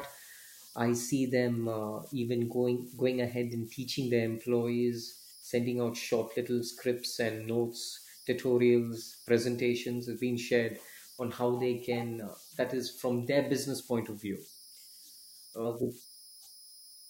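Converter idle tones run throughout the speech, from start to finish. A delta-sigma converter working without dither settles into repeating bit patterns on low-level input, producing a whistle around 5 kHz in pauses and grainy noise about 24 dB below the speech.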